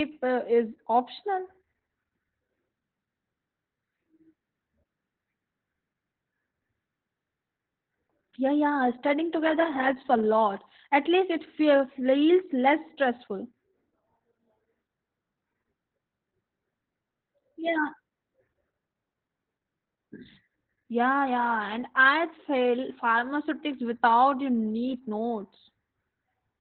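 Throughout the speech, Opus voice compression is running in its SILK linear-prediction mode at a very low rate, which fits about 8 kbps, and has fallen back to narrowband coding. Nothing survives above 4.3 kHz, so the voice sounds muffled and boxy, like an old telephone line. Because so few bits describe the excitation, the coding damage is heavy, leaving a hoarse, buzzy, slightly robotic edge on every syllable.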